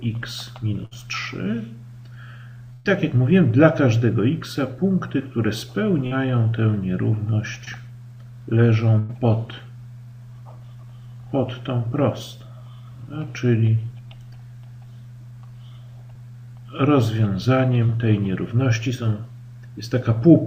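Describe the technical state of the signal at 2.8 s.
At 2.8 s the sound stalls into a held, fading tone or hiss from 2.73 to 2.87 s, then jumps ahead with roughly 120 ms gone. This is a burst of packet loss: the receiver stretched and faded the last audio across the gap.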